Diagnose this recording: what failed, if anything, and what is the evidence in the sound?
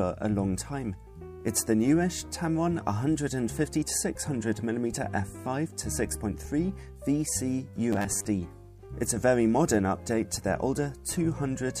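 From 7.93 to 8.26 s the sound becomes a rigid 100 Hz buzz: robotic sound from repeated short buffers. The likely cause is a starved buffer replaying a 10 ms chunk while about half the audio is skipped. Spectrograms show flat harmonics every 100 Hz; the waveform shows identical repeating cycles.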